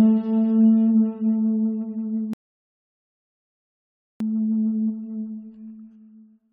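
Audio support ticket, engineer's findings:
Rebuffering stall, 2.33 to 4.20 s: audio cuts to silence, then resumes at the exact point it stopped. Player buffer ran dry awaiting downloaded data. Adds about 1.87 s; no content skipped, unlike a dropout, which loses audio.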